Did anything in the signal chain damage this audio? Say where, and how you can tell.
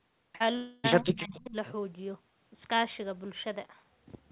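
Yes. At the network stage, a short concealed packet loss hits from 0.36 to 0.43 s. About 40 ms of the call never reached the decoder in time, and the receiver covered the gap by extending the preceding sound and then blending back into the real signal. You hear this as a brief smear or wobble in the speech, and any short consonant in that window can vanish.

From 0.56 to 0.87 s, roughly 280 ms of audio goes missing, which points to a long network dropout as the likely cause. The concealment never falls to silence here. Instead it stretches the last sound across the whole gap as a fading buzz or hiss. When the real speech returns, the lost portion is simply skipped, so the sound jumps forward rather than picking up where it stopped.

In the call processing stage, the speech drops sharply between 1.01 and 1.56 s, by roughly 30 dB at its deepest, over about half a second. The likely cause is suppression in double talk: the echo canceller could not tell the local talker apart from the far-end echo and pulled both down. 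You can hear this as speech that dips, dulls or cuts out in pieces. All of this sits within a band that stops at 4 kHz, which fits a narrowband telephone codec.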